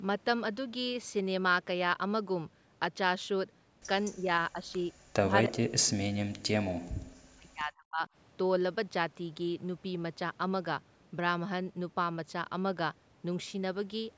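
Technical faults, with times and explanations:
4.15 to 8.05 s, speech suppressed in double talk: the sound dips by about 15 dB at 4.15 to 4.29 s and again at 4.53 to 4.73 s, then falls away almost completely, by about 40 dB, from 5.25 to 8.05 s. The likely cause is the far side talking at the same moment. The echo canceller then cannot tell the near talker from its own loudspeaker echo and turns both down.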